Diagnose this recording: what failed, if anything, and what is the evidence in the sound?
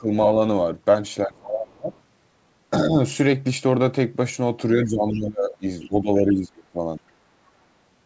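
The speech ducks at 0–0.12, 1.26–1.91, 2.9–2.96, 4.75–5.64 and 5.81–6.78 s, from a slight dip up to about 25 dB down. In the call processing stage, that's likely speech suppressed in double talk: the echo canceller mistook the talker for loudspeaker echo and pulled them down.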